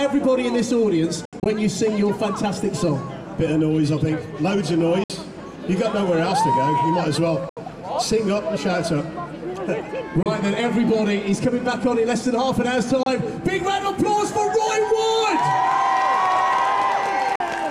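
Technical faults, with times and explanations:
1.25–1.46 s, 5.04–5.10 s, 7.49–7.57 s, 10.23–10.26 s, 13.03–13.06 s, 17.36–17.40 s: Bluetooth dropout. Silent gaps of 29 to 73 ms (the first split into several gaps) leave the audio further along when it resumes, likely from wireless packets arriving too late and being discarded.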